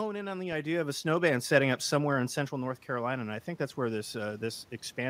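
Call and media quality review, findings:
Automatic gain rising, 1.01–5.05 s. Speech input falls about 11 dB after the talker shifts away from the mic (around half a second, again near 2 s). AGC compensates slowly, adding about 7 dB over four seconds. Voice and room noise swell together.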